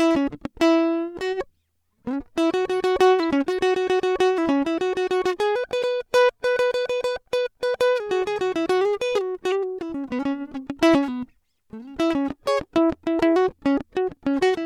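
Corrupt frame decoded at 5.83 s and 9.51 s in this music: each time, one damaged compressed frame plays anyway, misplacing energy as a brief glitch, the second louder.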